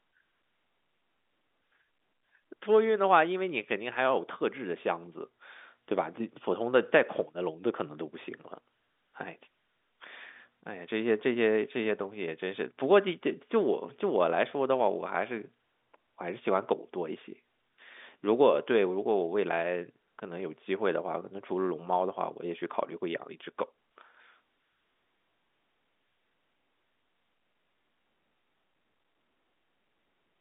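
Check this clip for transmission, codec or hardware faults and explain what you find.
Nothing in this speech stood out as a transmission, codec or hardware fault on listening.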